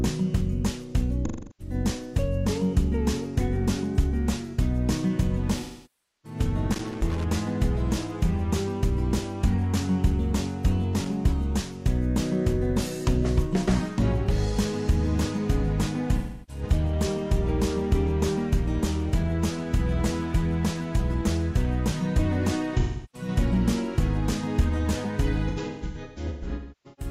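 The first AAC frame loss with concealment hits at 1.26–1.74 s. The decoder loses frames and papers over the gap by reusing the last good spectrum, so you get a smeared, phasey, noisy patch instead of a hard dropout. A longer one follows at 5.60–6.39 s, about 640 ms of lost audio. Right after it, at 6.72–7.24 s, there's a burst of loose connector crackle: irregular scratchy chopping from a contact making and breaking. A second, very short flick of it comes at 11.04–11.07 s. The concealment smear returns at 16.18–16.63 s and 22.80–23.28 s. From 25.48 s to the end, the losses get scattered, with about a second of audio gone across roughly 1.5 s and the longest run around 300 ms, so the ending sounds smeared and noisy in patches.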